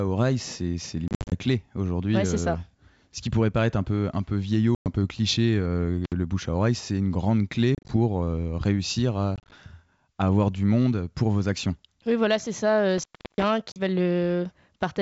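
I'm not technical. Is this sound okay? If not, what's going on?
No. Two problems come and go through this French speech.

The first is packet loss on an ADPCM call. The call travels in small chunks, and some go missing. Each gap is a sudden hole, and when the sound comes back the decoder is briefly out of step, so the speech returns slightly distorted for a moment. It happens five times. From 1.08 to 1.34 s, right after "oreille c'est" and before "clé aujourd'hui", the sound is broken up by several short holes. More gaps follow at 4.75 to 4.88 s, at 7.75 to 7.97 s just after "c'est une grande clé", at 9.36 to 9.53 s, and a brief one at 13.72 to 13.79 s.

The second is an intermittent contact, which points to a loose plug or cable that briefly stops connecting. The sound cuts out with a crackle at each edge, and only faint hiss remains while it is open. There is a short dropout from 6.05 to 6.13 s, and a longer one of about a third of a second from 12.98 to 13.44 s, just after "voilà c'est ça".

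The wideband telephone coding itself, G.722, sounds clear.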